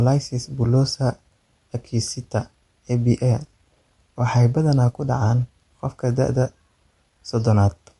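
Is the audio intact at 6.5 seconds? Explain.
No. At 6.5 seconds, as across the whole clip, the speech carries plainly audible damage that is likely from MP3 compression. Nothing remains above 11.3 kHz, a hard treble cut-off of the kind an MP3 encoder imposes when bits are scarce, and the degree of damage points to a low bitrate of around 48 kbps. Weak frequency lines are zeroed and then restored from frame to frame, producing a watery, swirling texture, metallic chirps on s sounds, and smeared attacks.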